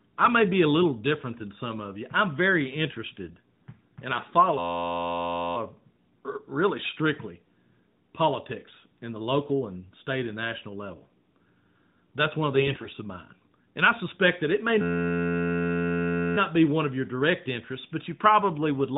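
At 3.26 to 3.42 s and again at 12.56 to 12.91 s you get AMR bit errors: flipped, unprotected bits scramble pulse positions and gains, so the speech briefly turns hoarse and gargly.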